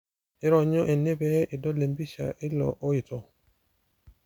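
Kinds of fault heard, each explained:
No faults can be heard.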